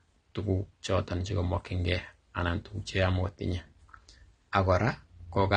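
Throughout the speech, nothing sounds above about 9.7 kHz, giving a dull, closed-in top. A spectrogram shows a flat ceiling with empty space above. This is likely low-bitrate audio saved at a high bitrate: a thin earlier encode re-saved as generous MP3, which cannot restore the lost band.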